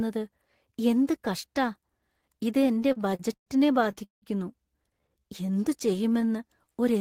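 Repeated stalls (stutter) occur from 2.59 to 3.48 s and again from 3.84 to 4.24 s. Packets arrived late, so the jitter buffer kept running dry and the receiver stretched the last sound to bridge each wait. The first stretch has eleven short stalls totalling 271 ms, the longest 113 ms. The second has five stalls totalling 216 ms, one lasting 179 ms and faded, covering about 55% of that span. Nothing is lost, but the speech drags and stutters.

A jitter buffer slow-down runs from 5.00 to 6.99 s. With its reserve low, the receiver padded the stream by repeating single pitch periods and slivers of pauses, adding 225 ms so the speech plays at 89% speed. Pitch stays the same, but sounds are drawn out and the delivery feels sluggish.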